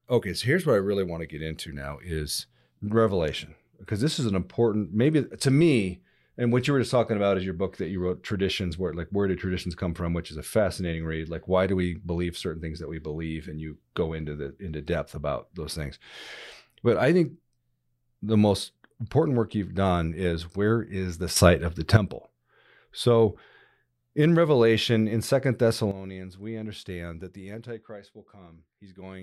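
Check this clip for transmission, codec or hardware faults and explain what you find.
Two sudden gain jumps stand out in this speech. Right after "is where is the", at 21.36 s, the level leaps up by about 11 dB and stays there until 21.97 s. Then at 25.91 s it drops by about 12 dB and stays down to the end. Both times the speech and the background noise shift together, in one step with no fade. That points to a gain setting or bit shift likely applied instantly rather than ramped in.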